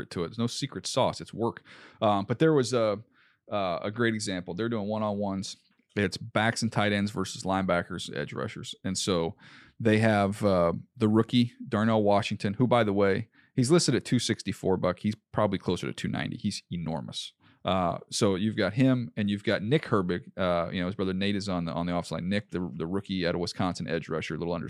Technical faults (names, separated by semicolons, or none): none